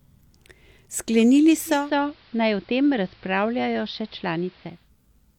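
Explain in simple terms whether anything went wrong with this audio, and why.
From 1.66 to 4.91 s the radio lost its digital signal and went through digital radio blending to analogue, cross-fading over about a third of a second to the AM broadcast. The sound turns duller, slightly quieter, with faint hiss. Unlike a plain dropout, it fades over and back.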